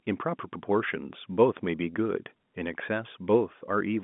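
No technical faults are audible.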